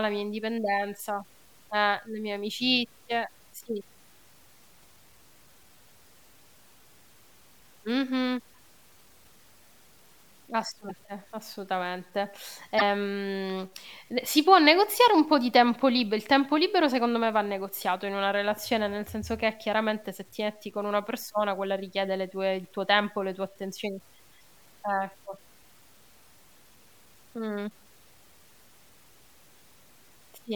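From the start and through the whole speech clip, quiet passages turn gritty, with a grainy distortion that follows the sound and a noise floor roughly 35 dB below the signal. This is likely low bit depth without dither: samples truncated to about 9 bits, so the rounding error tracks the speech.

At 10.86 to 10.91 s and again at 12.76 to 12.82 s, brief disruptions of about 60 ms each point to damaged data in a compressed stream. The decoder misreads corrupted frames, loses sync, and hunts for the next valid frame header.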